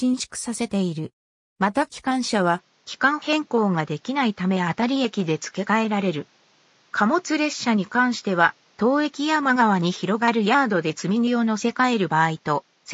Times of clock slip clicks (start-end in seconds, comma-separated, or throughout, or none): none